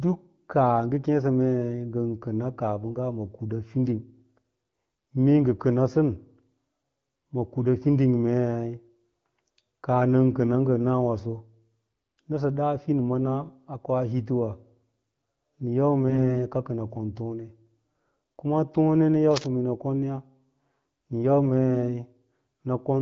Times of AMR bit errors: 5.54-5.58, 16.08-16.20

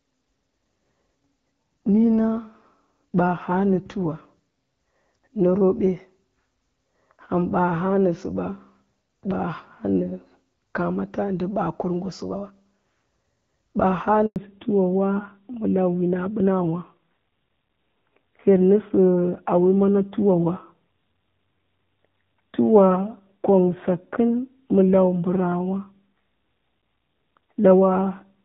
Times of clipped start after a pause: none

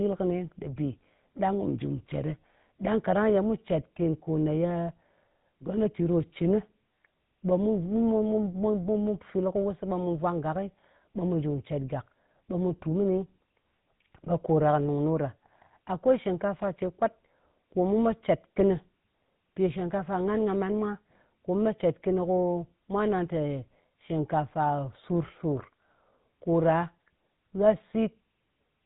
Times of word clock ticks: none

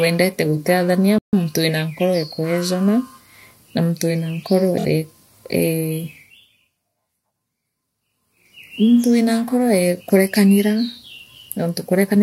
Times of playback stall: 1.18-1.33

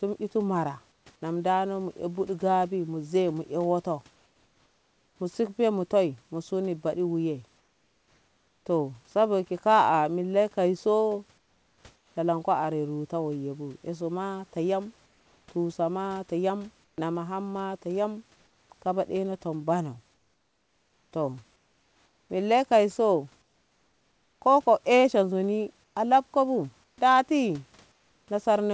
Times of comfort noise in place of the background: 0.92-1.06, 4.16-5.20, 7.58-8.66, 11.38-12.16, 15.06-28.28

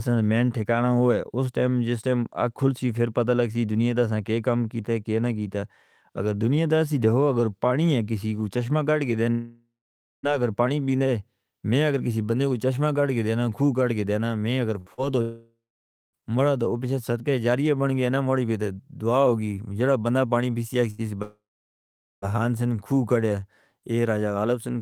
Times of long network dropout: 9.31-10.26, 15.22-16.16, 21.22-22.25

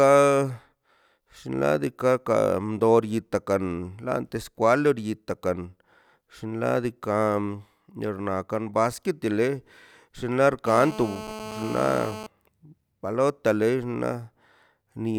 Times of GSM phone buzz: 10.66-12.27

